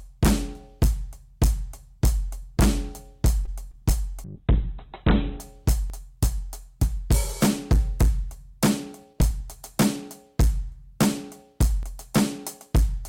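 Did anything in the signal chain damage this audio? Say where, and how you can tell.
Yes. Hard clipping runs through the whole music clip, most likely from a converter or sample-format stage. Peaks are driven about 18 dB past the ceiling, so around 5 percent of samples are cut flat. Unlike codec roughness, the harsh fuzz tracks loudness, not time.

A short stall from a late packet appears at 3.45 to 3.49 s, in the network and jitter buffer. About 18 ms of held sound, with a slight buzz or dip, is inserted, then playback resumes where it left off. Nothing is lost, which separates it from true packet loss.

Short concealed packet loss follows at 3.71 to 3.75 s. Here 20 ms of real audio never arrived, and the decoder extended the preceding sound to cover it. The brief smear replaces material rather than delaying it, and the blend back avoids a hard click.

A call bitrate drop hits from 4.25 to 5.48 s. 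For about 1.2 s the top end collapses from 20 kHz to 4 kHz and the sound turns watery, which fits the encoder falling from around 96 kbps to 8 kbps. It's a muffling, not a dropout.

Audio missing between chunks shows as abrupt skips at 5.90 s and 11.83 s, each losing about a twentieth of a second. They are spliced with no fill, about 6 s apart, so a recorder or processor handing over buffers is the likely cause rather than the network.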